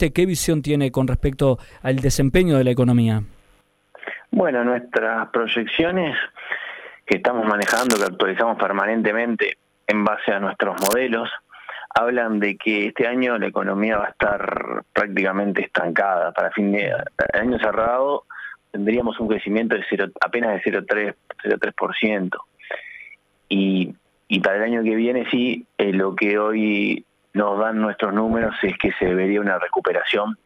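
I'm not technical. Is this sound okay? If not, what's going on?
No. DAB burbling shows up at 5.68–6.12 s, 13.94–14.59 s, 16.99–17.87 s, 18.94–19.38 s and 28.28–29.12 s. A weak digital radio signal let a small share of corrupted data slip through, so narrow slices of the sound get short blips of noise.

Cable scratch noise appears at 7.62–8.09 s and 10.78–10.95 s: brief, dense scratching or rustling over the sound. The likely cause is a worn cable, plug or knob being moved, making its electrical contact flicker rapidly.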